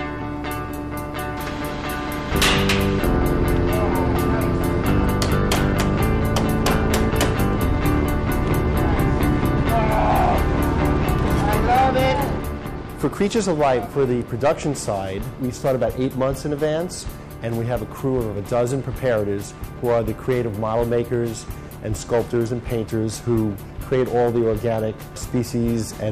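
Hard clipping runs throughout. The signal is driven about 10 dB past the limit, flattening a small share of peaks. Loud moments crackle with harsh, buzzy edges.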